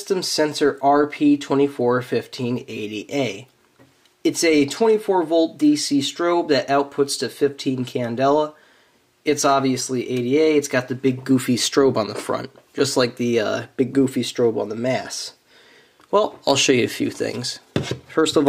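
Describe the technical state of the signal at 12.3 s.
At 12.3 s the signal is intact, with no dropout, distortion, glitch or other fault audible at that point.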